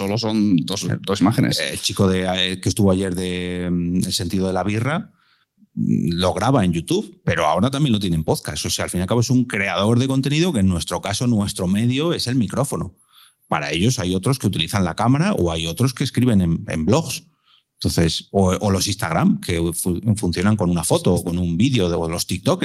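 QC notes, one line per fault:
No faults were heard in this speech clip. Nothing in the recording calls for a QC note.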